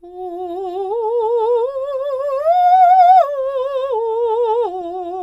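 From 2.21 to 2.47 s and again at 4.81 s, DAB burbling: bit errors slip past error correction, so wrong samples put short noise blips in single MP2 sub-bands rather than silent dropouts.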